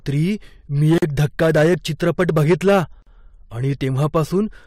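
Hard clipping runs through the whole speech clip. The signal was driven about 6 dB past what one stage could pass, so the loudest peaks are sliced flat, a few percent of samples in all. Each flattened crest adds harmonics high in the spectrum, heard as crackle on the peaks. A waveform view shows peaks pressed into flat plateaus at the same level. A spectrogram shows broadband vertical smears above the speech bands at those moments.

A gap at a join of encoded pieces opens from 0.98 to 1.02 s. The sound stops dead for about 43 ms and then resumes where it left off. Separately encoded segments were butted together with their encoder start delay and final-frame padding left in, so a silence gets inserted. On the waveform it shows as a flat line with sharp, slightly softened edges. The spectrogram shows a clean vertical blank strip across all frequencies.

The same gap returns from 3.02 to 3.07 s, again about 43 ms long and about 2 s after the first. 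That regular spacing points to fixed-length pieces being joined. It sounds like the same brief dropout and looks the same: another empty column on the spectrogram and another flat stretch in the waveform, framed by slightly softened cut-off and restart edges.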